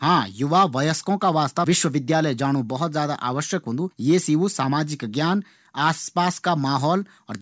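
A speech recording with nothing technically wrong with it.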